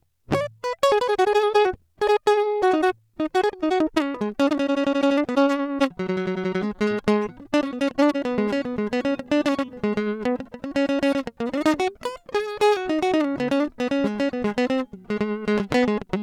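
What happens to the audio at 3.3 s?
At 3.3 s the music sits inside a time-stretched section running from 0.0 to 8.24 s, played about 1.48 times too fast. Pitch holds while the pace rushes, likely from software dropping short pieces to shorten it. A spectrogram shows harmonics at unchanged heights but events packed closer, with small seams where pieces were cut.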